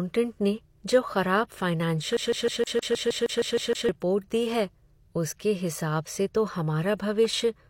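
From 2.17 to 3.89 s the speech is caught in a CD stuck on one turn. A scratch throws the laser back to the same spot, so one 156 ms slice plays 11 times with a brief mute at each jump. The perfectly even rhythm separates it from the irregular repeats of dropped network packets.

Inside that stutter, pre-echo appears at 2.64 to 2.67 s, 2.79 to 2.83 s and 3.26 to 3.30 s. The codec spread the quantisation noise meant for a sharp attack across its whole block, so about 32 ms of hiss precedes each onset and the attack sounds smeared. Unlike reverb, this noise comes before the sound rather than trailing after it.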